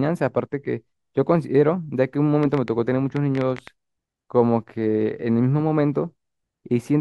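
A speech recording carries a train of clicks from 2.43 to 3.68 s: about ten sharp, similar ticks at roughly 8 per second, unevenly spaced and poking a few decibels above the speech. Likely cause: interference from nearby equipment or a faulty connection or power supply.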